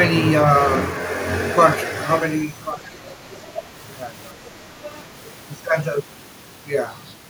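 From 2.93 to 3.71 s the speech dips in patches totalling about half a second, the deepest by about 15 dB. This is speech suppressed in double talk, likely an echo canceller turning down the talker while the far end spoke. On a waveform the envelope sags, and a spectrogram shows energy thinning. Inside that span, faint scraps of the other side's voice leak through at 3.09–3.14 and 3.34–3.39 s, about 25 dB below the speech, most likely residual loudspeaker echo, seen as brief low-level streaks. A milder suppression at 4.35–4.56 s drops the level by about 5 dB. More leaking through follows at 4.84–5.02 s, about 20 dB down, and at 5.27–5.31 s, about 30 dB down.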